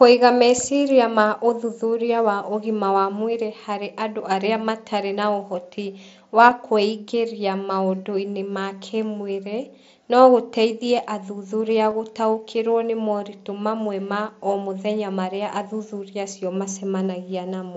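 At 6.5 s and again at 11.9 s there's concealed Bluetooth headset packet loss: audio packets from the headset dropped, and the phone patched each gap by repeating a matching slice of the preceding speech. The first gap is about 7.5 ms, the second about 15 ms. The first, a single lost packet, is short enough to nearly vanish through the mSBC wideband sound; the second, two packets in a row, comes through as a brief buzzy tone with a small warble where the real audio returns.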